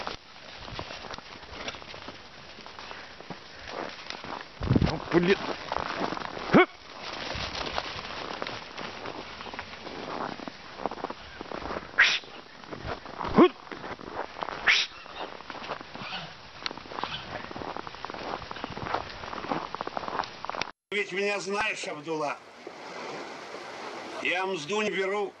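Damaged data in a compressed stream shows up at 2.07–2.10, 13.90–13.93, 19.07, 21.58–21.61 and 24.85–24.88 s as short glitches where the decoder misreads corrupted frames and resyncs. A phantom power thump at 13.32–13.45 s is a low bump decaying over about 29 ms, from a supply switching on a live input.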